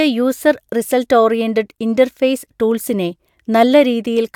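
No technical fault can be heard anywhere in the recording; the signal holds steady from its first moment to its last.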